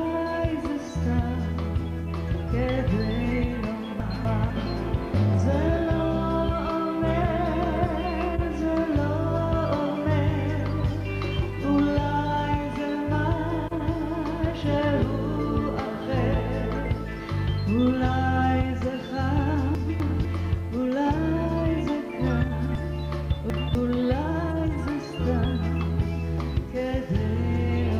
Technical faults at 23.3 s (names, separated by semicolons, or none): chunks out of order